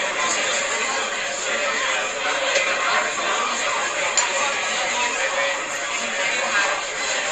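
Right from the start and all the way through, these sounds have the swirly, hollow smear of generation loss, with blurred attacks and nothing above 12.7 kHz. That's likely repeated MP3 re-encoding, around five passes, at what fits 64 kbit/s.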